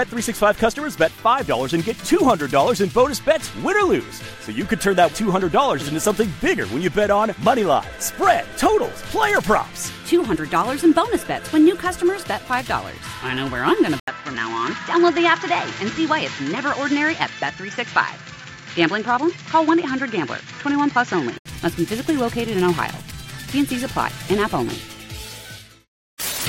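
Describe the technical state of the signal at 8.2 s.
At 8.2 s the signal is intact, with no dropout, distortion or other fault audible at that moment.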